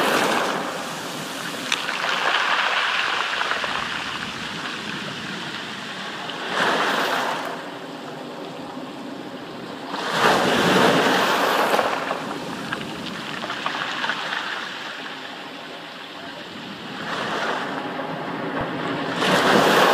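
At 0.72, 1.72, 14.82 and 18.61 s you get a small jump in the sound, each time skipping roughly 10 ms with no gap of silence. That pattern points to a dropped buffer (overrun): the software likely didn't collect its samples before the hardware overwrote them, so a sliver of the sound vanished and the two sides were butted straight together, which is what makes the jump.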